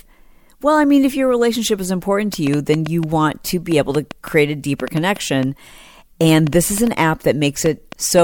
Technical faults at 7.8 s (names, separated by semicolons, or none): train of clicks